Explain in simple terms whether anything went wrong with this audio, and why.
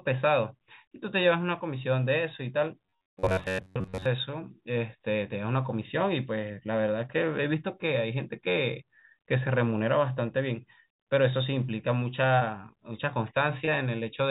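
Two kinds of fault can be heard in this speech, both typical of a call connection.

From 2.86 to 4.06 s the voice turns into a hard, metallic buzz that still roughly tracks the speech. This is robotic sound from repeated short buffers. Audio was likely arriving too slowly, so the software kept replaying the last tiny slice instead of waiting, for most of that stretch. The replays impose a fixed pitch of about 94 Hz, which fits a slice of roughly 11 ms repeating over and over.

At 12.40 s and again at 13.65 s there is a brief smear, each lasting a few hundredths of a second. These are short concealed packet loss. In each case about 20 ms of audio never arrived in time. The receiver covered the gap by stretching out the sound just before it, for 11 ms the first time and 20 ms the second, then blended back into the real audio.

The call codec also removes everything above 4 kHz, which gives the voice its narrow telephone sound.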